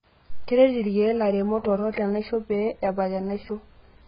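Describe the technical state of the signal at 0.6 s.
At 0.6 s the speech carries AAC compression damage, and it persists across the whole clip rather than being local to that moment. Nothing is present above 5.1 kHz, so sibilants and consonant edges lose their top end and sound dull. The remaining band has a smeared, warbling texture. The likely cause is heavy AAC-LC coding, which fits a bitrate near 12 kbps. The encoder quantises its frequency lines so coarsely that it drops the upper band and leaves gaps in the spectrum.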